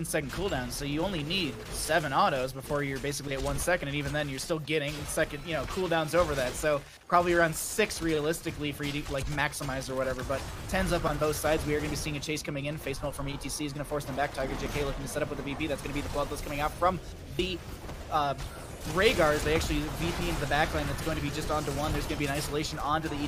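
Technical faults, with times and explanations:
3.83 s, 5.24 s, 14.66 s and 17.39 s: dropped buffer (overrun), likely the program failing to collect samples before the hardware overwrote them. Each time a short stretch, roughly 10 to 30 ms, vanishes and the two sides join directly, so there is a sudden jump forward in the sound with no gap.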